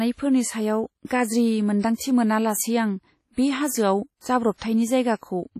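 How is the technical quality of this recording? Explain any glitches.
The quality's pretty rough: heavy codec damage runs through the whole speech clip, from start to finish. It's likely WMA compression. The sound is ringing and washy, with a hiss that swells and fades along with the speech, and nothing comes through above 16 kHz. A transform codec like this chops audio into long blocks, so quantisation noise smears across tens of milliseconds, and quieter spectral detail gets thrown away entirely, which fits a low bitrate of about 32 kbps.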